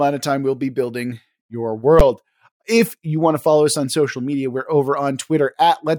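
A single loud bang cuts through the speech at about 2.0 s, right after "we'll be building your". These are invalid numbers at full scale: a calculation produced invalid values that pinned one short block, which fits a 512-sample buffer, at maximum level.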